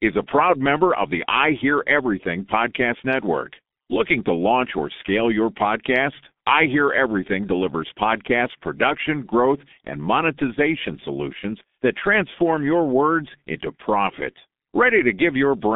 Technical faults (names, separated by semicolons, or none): G.723.1 codec